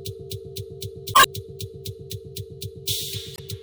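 A short audio clip with two bursts of damaged data in a compressed stream. Garbled blips sit at 1.11 to 1.26 s and 3.33 to 3.40 s. Corrupted bytes there made the decoder misread frames, lose sync and hunt for the next valid frame header.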